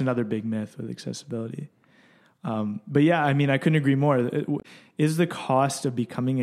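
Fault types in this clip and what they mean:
Damaged data in a compressed stream: from 4.59 to 4.65 s, just before "is the", corrupted bytes in the encoded speech make the decoder misread those frames and lose sync until it finds a valid frame header, leaving a brief 70 ms disruption.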